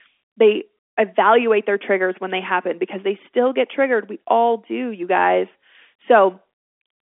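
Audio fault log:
No faults are heard in this speech clip. It carries the sound of G.711 telephone coding, with the band held to roughly 250 Hz to 3.5 kHz and nothing above about 3.8 kHz.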